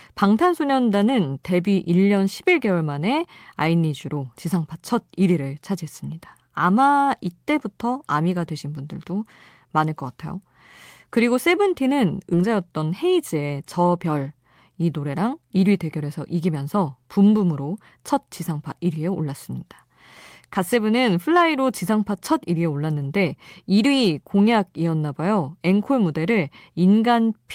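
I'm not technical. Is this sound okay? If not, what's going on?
No. At about 12.33 seconds the speech suddenly jumps forward. This is a skip ahead: roughly seven tenths of a second of speech never gets played, and the parts before and after are stitched together with no pause, so something is simply missing.

Right after that, from 12.43 to 14.21 seconds, the speech sounds a little rushed, running about 10% faster while the voice stays at its normal pitch. This is a jitter buffer speed-up. The receiving end had built up extra waiting audio, so it trimmed tiny slivers, about a fifth of a second in total, to catch up.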